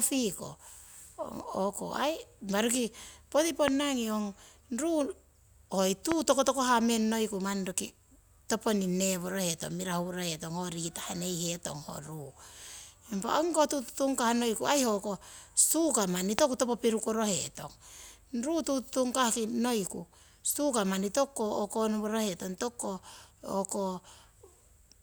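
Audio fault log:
3.68 s, 6.12 s and 16.39 s, loud pop: A single sharp pop lands on the speech each time, peaking roughly 20 to 25 dB above it. Each is a brief voltage pulse, likely from a switch, static or plug contact. The speech continues underneath.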